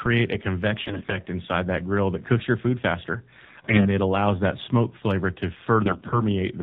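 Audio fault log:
throughout: AMR narrowband mobile codec. The speech is confined below 4 kHz and carries a plainly audible buzzy, synthetic edge from the vocal-tract model, with few excitation pulses per subframe. The degree of coarseness fits the low 7.4 kbps mode.
0.86–1.18 s, 3.44–3.89 s, 5.86–6.22 s: AMR bit errors. Three bursts turn the voice hoarse, scratchy and gargly while pitch and level roughly hold. The first comes just before "inside that grill that", the second between "cooks your food faster" and "it allows that smoke", and the third after "that smoke flavor to". The first burst has the highest bit error rate, roughly 15% against about 10% for the other two. Flipped weakly protected bits misplace excitation pulses and skew the fine gain and spectral values.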